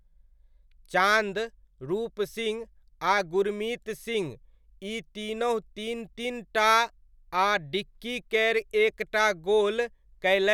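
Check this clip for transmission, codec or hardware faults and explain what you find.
Nothing here points to a transmission, codec or hardware problem; the speech comes through without any fault to report.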